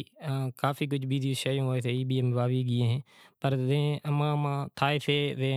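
No technical faults are audible.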